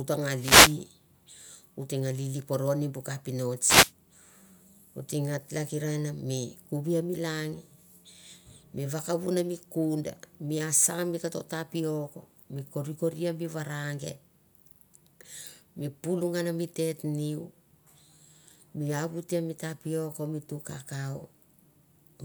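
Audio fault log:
0.36–0.77 s and 3.64–3.92 s, wireless microphone noise hit: short bursts of static swish over the speech, the first just after "ta nga", as the FM radio signal fades and receiver noise rises.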